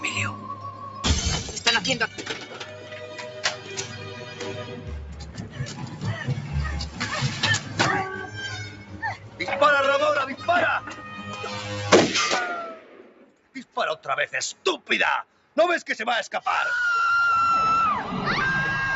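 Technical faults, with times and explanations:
Throughout: noise suppressor applied to music or sounds. A suppressor tuned for speech stays active across the whole clip and keeps deciding that sustained parts of the sound are background noise. It turns them down while letting onsets pass, so the level rises and falls by around 10 dB. Held material thins and flutters, and tails are trimmed. The top end stops at 8 kHz, which is the call path's normal bandwidth, not part of this fault.
0.55–0.82 s, 2.08–4.88 s, 5.28–5.99 s, 8.68–9.4 s, 12.75–13.76 s, 14.54–14.89 s, 15.24–15.56 s: sound cut by the noise suppressor. In each stretch the suppressor treats the sound as noise and pulls it down harder than its surroundings, by about 5 dB at first and deepening to about 8 dB from 8.68 s on. The longest dip, 2.08–4.88 s, sinks for roughly two seconds in total. Steady and decaying portions drop away while sharp attacks survive.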